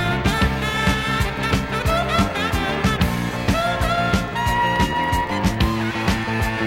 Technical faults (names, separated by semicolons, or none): GSM phone buzz